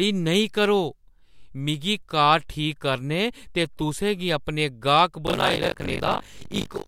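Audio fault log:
5.26–6.87 s, buffer tearing: the speech takes on a robotic rattle at 50 Hz, present only while sound plays. Writer and reader have slipped inside the ring buffer, so about two fifths of each 20 ms period replays audio from roughly 40 ms earlier, with abrupt joins.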